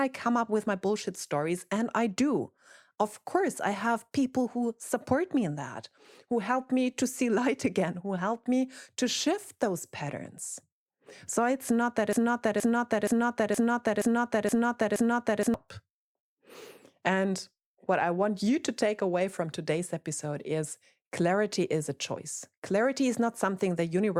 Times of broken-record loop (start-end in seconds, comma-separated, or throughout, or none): 12.13-15.54